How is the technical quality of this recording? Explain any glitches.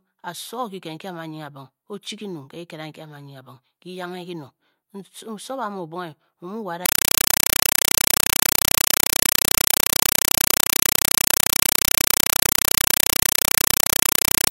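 The speech is replaced by loud noise for the second half of the recording. A compressed stream played as audio begins at 6.86 s and lasts to the end. Here an AC-3 (Dolby Digital) bitstream, a 256 kbps stream, arrives over the digital link and is treated as ordinary PCM samples instead of being decoded. Each coded frame becomes a 5.33 ms burst of noise followed by silent padding, repeating 31.25 times a second. In place of the speech you hear very loud, harsh chattering static with a steady buzzing rhythm.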